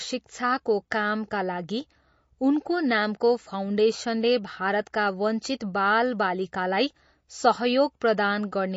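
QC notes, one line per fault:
Throughout, MP3 compression: plainly audible watery swirl and nothing above 7.6 kHz, likely a low-bitrate encode near 32 kbps zeroing weak lines and cutting treble.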